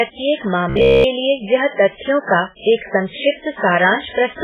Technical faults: MP3 compression; robotic sound from repeated short buffers

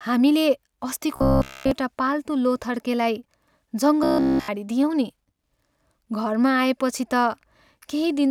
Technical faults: robotic sound from repeated short buffers

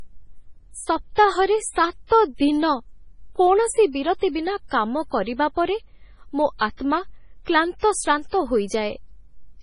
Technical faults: MP3 compression

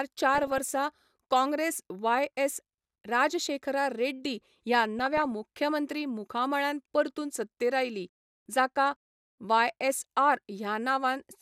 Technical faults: DAB burbling

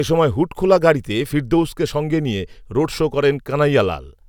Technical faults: none

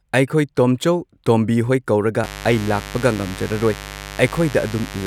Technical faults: mains buzz

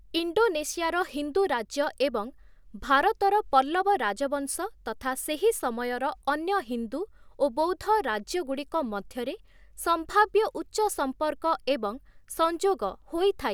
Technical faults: none

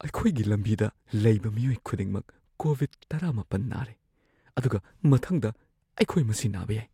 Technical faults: dropped samples

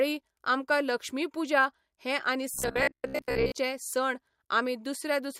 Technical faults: robotic sound from repeated short buffers

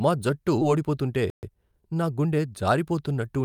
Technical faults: skip ahead; jitter buffer speed-up; playback stall; time-compressed catch-up

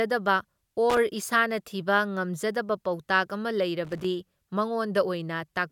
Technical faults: loose connector crackle

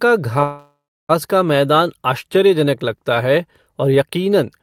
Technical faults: call audio freeze

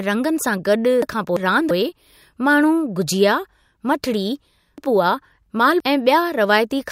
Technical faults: chunks out of order

